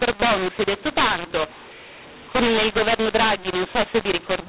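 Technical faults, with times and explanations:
Throughout: mu-law and A-law mixed up. Speech written as mu-law but read as A-law, so sample levels are scrambled, giving harsh distortion and noise-filled pauses.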